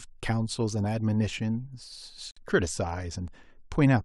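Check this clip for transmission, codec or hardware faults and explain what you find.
One transmission fault appears in the speech: a gap between stream segments from 2.31 to 2.37 s. Where two segments meet, their timestamps leave a hole of about 54 ms. The player fills it with digital silence, so nothing is lost, but the sound stops abruptly and restarts. On a waveform it shows as a flat line with hard vertical edges. On a spectrogram it is a clean vertical blank band across all frequencies.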